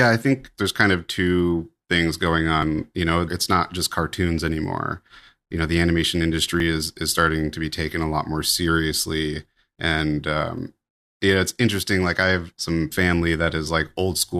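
Overlap between stream segments occurs at 2.63 s, 6.60 s and 10.58 s in this speech clip. The delivery is split into 4-second segments whose time stamps overlap slightly at each join. The player discards the overlapping stretch as if it were duplicated, though that audio was never repeated, so a few milliseconds of speech are removed. The waveform jumps across the gap, producing a brief click or tiny skip that recurs about every 4 seconds.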